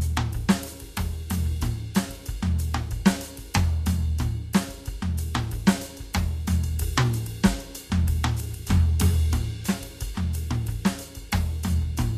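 Across the whole music clip the treble turns hissy and grainy, tones sound roughened and attacks are blurred, and nothing is heard above about 14.1 kHz. This is most likely Vorbis compression at a low setting: the codec keeps a smooth outline of the spectrum but quantises the fine high-frequency detail so coarsely that it becomes noise of similar energy. The plainly audible damage points to a bitrate in the high thirties of kbps.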